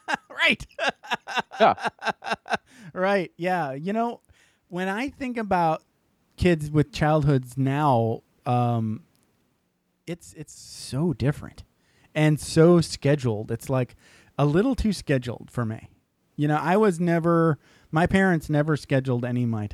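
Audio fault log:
No faults heard.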